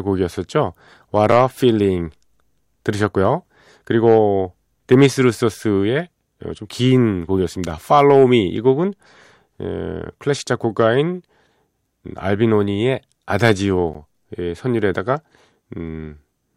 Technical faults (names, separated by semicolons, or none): block of digital silence